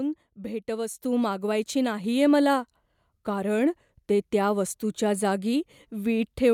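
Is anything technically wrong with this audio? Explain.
Yes. At 1.02 s the microphone volume is stepped up: the call software judged the input too quiet and raised the device's gain in a single move of about 5 dB. The speech and the background noise jump louder together, at the same instant, rather than the talker simply speaking up. On a waveform the envelope widens abruptly at that point; on a spectrogram every band, including the noise floor between syllables, brightens at once.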